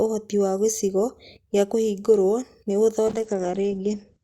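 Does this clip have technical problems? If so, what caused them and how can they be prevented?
Yes, there's a call bitrate drop from 3.09 s to the end at 4.23 s, right after "gĩcigo gĩa kũhingũrwo nĩ". The bandwidth estimate fell, and the encoder was pushed to code far more coarsely, which fits a drop from around 64 kbps to about 11 kbps. The speech turns rough and muffled as the top end is cut from 20 kHz to 8 kHz. A steadier network link and a sensible minimum bitrate would prevent it.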